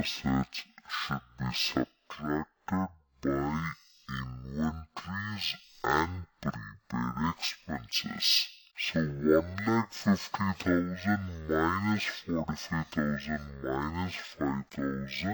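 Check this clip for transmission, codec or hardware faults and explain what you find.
There's one fault, running the whole way through: stereo read as mono. Left and right samples got played back-to-back as one channel, so everything runs at 0.5x speed and drops a full octave, 12 semitones, with a faint mirrored copy up top.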